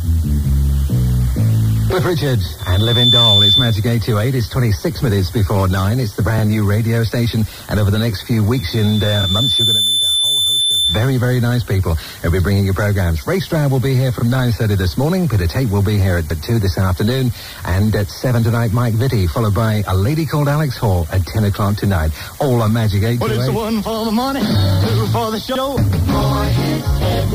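A 3.5 kHz tone swells into a piercing squeal from 2.59 to 3.87 s, climbing in about half a second to roughly 5 dB above the programme. It returns at the same pitch from 8.55 to 11.11 s, building more slowly over about a second and a half and settling at roughly the programme's own level. This is loudspeaker feedback squeal. The microphone is hearing the speaker it drives, and at 3.5 kHz the loop gain passes unity, so that frequency keeps feeding itself.

Inside the second squeal, at 9.23 s, a sliver of sound plays twice, a 32 ms hiccup. The same stutter comes at 14.19 s (32 ms) and at 25.55 s, where 64 ms repeats. The longest is at 16.30 s, where 128 ms is replayed. These are repeated frames. A stretch of compressed data was delivered twice and decoded again, and each repeat lengthens the audio by the replayed time. The 32 ms step fits one frame per short repeat, with the longer ones being two and four frames.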